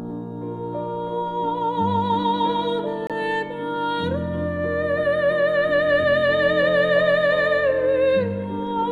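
From 3.07 to 3.11 s, damaged data in the compressed stream throws the decoder off frame sync.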